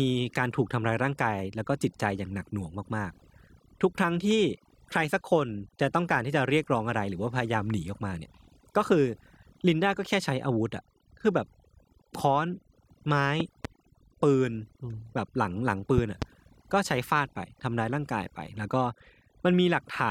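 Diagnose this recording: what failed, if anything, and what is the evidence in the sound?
Overdone noise removal runs through the whole clip, a fault in the processing stage. The background between phrases collapses to near silence dotted with twinkling specks. A suppressor set far too aggressively is pulling individual frequency bands down or out whenever their level sits close to its noise estimate, so the quieter components of the speech are removed along with the noise.

Two loud pops appear, at 13.40 to 13.67 s and at 15.98 to 16.24 s. Each is a pair of sharp pops in quick succession, peaking about 10 dB and about 15 dB above the speech respectively, with the speech continuing underneath. This most likely comes from the analogue wiring, where a voltage step or pulse from a plug, switch or static discharge enters the signal and the downstream circuits shape the pulse.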